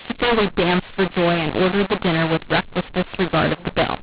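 Harsh, scrambled levels and noise-filled pauses run throughout the speech: mu-law and A-law mixed up, with mu-law-coded G.711 telephone audio decoded as A-law.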